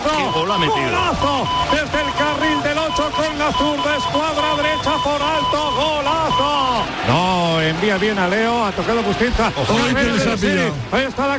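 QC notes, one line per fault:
No faults found anywhere in this clip.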